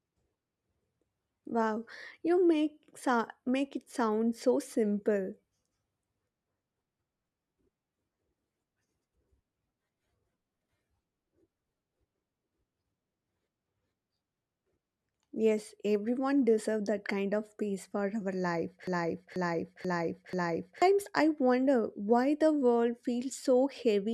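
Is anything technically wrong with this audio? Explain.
Yes. A broken-record loop runs from 18.87 to 20.82 s, right after "peace for our life": a 0.49 s fragment repeats four times, identically and seamlessly, before "I wonder why the". Unlike echo or stutter, nothing decays or varies. The likely cause is a stalled stream replaying its last buffer, so the intervening audio is lost.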